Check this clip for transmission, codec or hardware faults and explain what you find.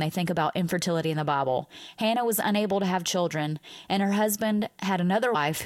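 One fault turns up near the end of the speech. At 5.34 s there are compressed frames skipped: a few frames, about a tenth of a second, never get decoded, so the audio jumps ahead.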